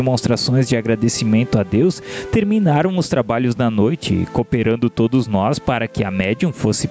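Throughout the clip the level pumps, swinging by around 15 dB, as gain pumping squashes loud and soft parts together, likely from gain set far too high with a fast limiter pulling it down on each loud sound.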